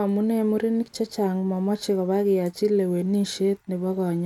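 No technical faults are audible.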